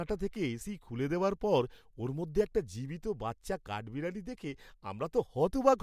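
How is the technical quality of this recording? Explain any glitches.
The technical quality of this recording is good, and there are no glitches to explain.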